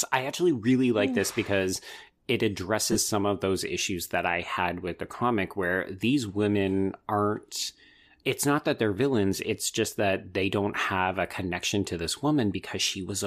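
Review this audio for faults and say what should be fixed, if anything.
Two brief gaps in the speech turn into a noisy smear: at 2.92 to 2.96 s, just after "mm this because it" and before "some of those issues", and at 4.53 to 4.57 s, after "those issues that I" and before "with the comic where". These are lost LE Audio frames. About 30 ms and 38 ms of audio went missing, which fits runs of four and five 7.5 ms frames. The LC3 decoder filled each hole by repeating the last spectrum with scrambled phase, so the sound carries on as a short hiss instead of a clean dropout.

Improving link robustness, for example through less radio interference, a shorter distance or more retransmission margin, would prevent these losses.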